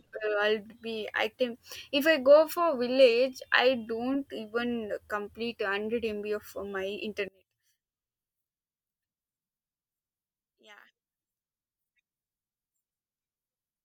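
From 7.28 s onward, speech falls about 27 dB to a faint residue, likely one channel inverted cancelling in mono; waveform and spectrogram shrink sharply.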